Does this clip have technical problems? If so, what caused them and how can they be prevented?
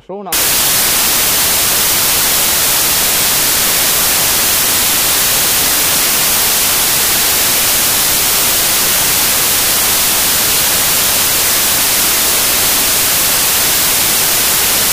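Yes: from 0.33 s to the end, samples built from the wrong bytes let fast-changing low bits dominate, giving loud, harsh broadband noise that shows as full-band spectrogram energy and a solid waveform block. Prevent it by matching the reader's byte order, offset and sample width to the file's actual format.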